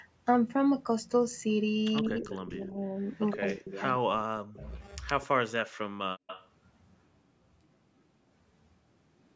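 Between 1.96 and 2.43 s, 3.08 and 3.4 s, 4.58 and 5.27 s, and 6.27 and 6.48 s, an echo leak is audible. A distinct copy of the speech trails 115 ms behind at about 10 to 15 dB down. Because the delay is fixed, it sounds like a repeat rather than a room tail. This is likely loudspeaker sound that an echo canceller failed to remove.

Speech suppressed in double talk also occurs at 2.02 to 2.81 s, 3.38 to 4.66 s and 5.46 to 5.57 s. The talker dips by up to about 40 dB while the other side speaks, likely because the canceller pulled both down together.

At 6.16 s, the background is gated by the echo canceller. Room sound falls away by about 40 dB for roughly a tenth of a second, then returns.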